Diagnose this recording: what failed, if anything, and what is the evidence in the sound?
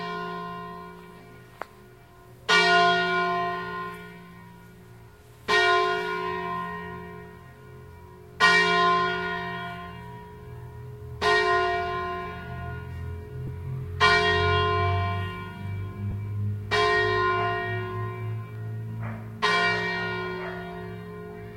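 Lost LE Audio frames on the Bluetooth link: brief dropouts at 13.47 s and 16.11–16.13 s, each about one 10 ms frame, patched by the LC3 decoder reusing the last spectrum with random signs.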